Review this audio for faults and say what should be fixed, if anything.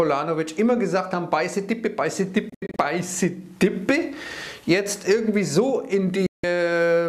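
Digital broadcast dropout at 2.50 to 2.79 s and 6.26 to 6.44 s: the receiver stopped getting valid frames and muted with a 3 ms fade. The first event is scattered holes totalling 168 ms, longest 72 ms; the second loses 168 ms, which fits seven dropped frames. Improving reception margin, with a better antenna, stronger signal, or more robust error protection, would prevent these mutes.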